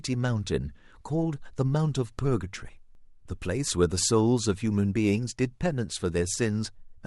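The time stamps of neighbouring stream segments overlapped, and the player trimmed the supposed duplicate even though that sound had never been repeated. This overlap between stream segments removes about 5 ms of the speech at 2.95 s and about 8 ms at 4.94 s, so the waveform jumps across each gap. Each jump is heard as a short click or tiny skip. The two events fall roughly 2 s apart, which fits segments 2 s long.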